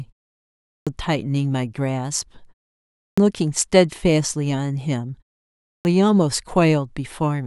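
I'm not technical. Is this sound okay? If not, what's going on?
No. After each pause, the speech comes back with its opening cut off: a clipped start after a pause, at 0.57, 2.91 and 5.58 seconds, each losing about a quarter to a third of a second. The playback device dozes during silence and wakes too late. Fading pauses alone lose nothing; here the first sounds vanish.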